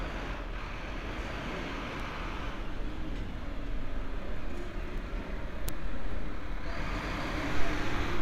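At 2.00 s and again at 4.98 s the sound skips abruptly, each time dropping something like 20 ms and joining the two sides with no gap. The three-second spacing points to audio missing between chunks, likely lost while the recorder closed one block and opened the next.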